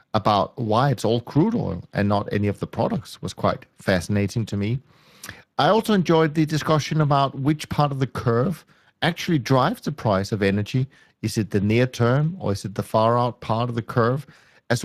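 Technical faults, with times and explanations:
Throughout: Speex codec. The speech has plainly audible coding damage, a grainy, hoarse texture riding on everything. Speex is a CELP coder that rebuilds the voice from a predictive filter plus a coded excitation signal, and with a limited bit budget that excitation comes out rough. The damage level fits a Speex stream at roughly 22 kbps. There's also nothing above about 15.3 kHz, so the very top of the spectrum is simply gone.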